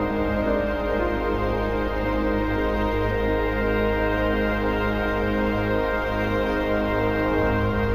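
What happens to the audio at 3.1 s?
At 3.1 s the audio carries imaging from linear upsampling, present through the whole clip. The rate was raised by joining samples with straight lines, which fits a 16 kHz source brought up to 48 kHz. That crude filter dulls the top of the band. It also leaves a faint mirror copy of the spectrum from 8 kHz to 16 kHz, about 40 dB below the signal. It is heard as a light metallic shimmer on bright, high content.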